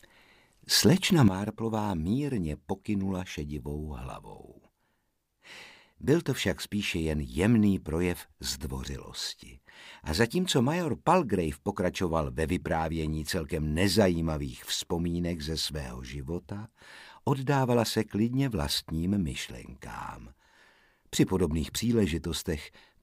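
A digital gain change was likely applied in a single step with no ramp, a sudden gain jump at 1.28 s. From that point to the end, the audio and its background noise drop together by about 12 dB and stay at that lower level.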